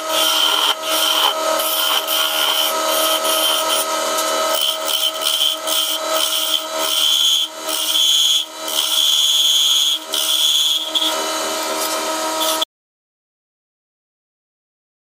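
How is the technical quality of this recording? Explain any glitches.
There is one clear glitch. At 12.64 s the audio drops out to silence and stays dead to the end: a complete cut with no room tone, likely a lost input while recording continued.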